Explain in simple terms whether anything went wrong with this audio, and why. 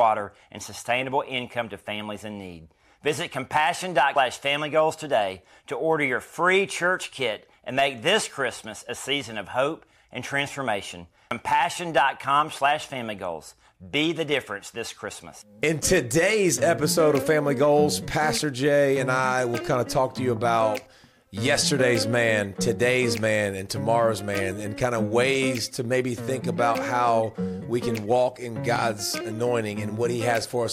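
Two quick glitches occur, at about 4.16 s and again at 11.31 s. Both are damaged data in a compressed stream: a little chunk of the compressed file got scrambled or lost. When the player hits those bad bytes, it can't make sense of them, briefly loses its place and has to hunt for the next clean starting point. That stumble comes out as a short blip or chirp in the sound.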